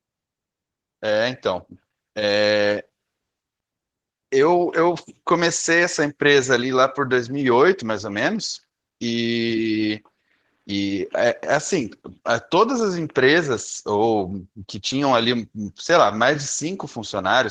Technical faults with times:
0.00-17.50 Opus voice compression

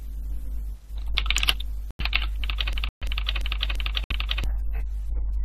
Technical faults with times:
1.91-2.00 corrupt frame muted
2.73-4.44 system hang loop
2.89-3.03 corrupt frame muted
4.04-4.12 corrupt frame muted

